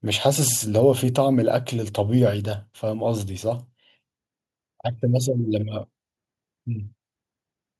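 No audible faults turn up anywhere in the recording; nothing in the speech calls for attention.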